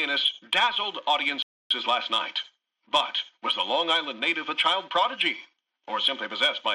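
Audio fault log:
1.42–1.71 s, rebuffering stall: playback halts into complete silence for about 0.28 s, then picks up at exactly the point where it broke off, with no material skipped or repeated. The player exhausted its downloaded audio and had to wait for more data before continuing, so the gap is pure added time rather than a dropout. The content stays intact, but the timeline stretches by roughly 282 ms.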